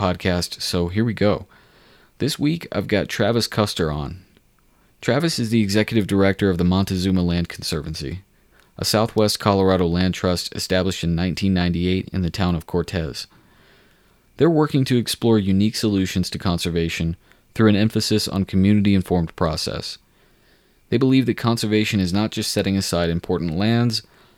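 A speech recording with one electrical switching spike at 9.18 s, a sharp snap peaking around -20 dBFS, likely from a nearby switch arcing. It shows as a thin vertical broadband line on a spectrogram and a lone needle in the waveform.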